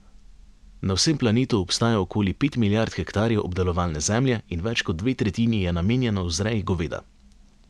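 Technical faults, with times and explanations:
Listening closely to the speech recording, nothing stood out as a technical problem at any point.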